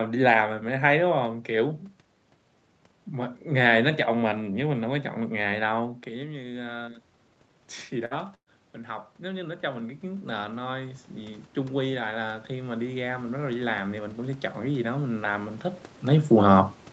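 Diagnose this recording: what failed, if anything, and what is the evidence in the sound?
In the call processing, automatic gain rising lifted the level by about 4 dB from 4.31 to 7.07 s, then about 11 dB from 9.2 to 15.68 s, swelling voice and background together.

On the network, a burst of packet loss at 8.05 to 8.14 s removed 60 ms, and another at 8.35 to 8.49 s removed 120 ms. Concealment stretched the last sound and faded it down, in the second gap to silence, before speech resumed.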